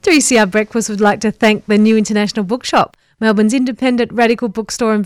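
Speech with hard clipping in five bursts, at 0.07–0.60 s, 1.02–1.99 s, 2.54–2.81 s, 3.27–3.42 s and 3.86–4.32 s, overdriven by about 2 to 8 dB. The peaks are sliced flat, giving harsh crackle. The waveform shows squared-off tops, and the spectrogram shows harmonic smearing up high.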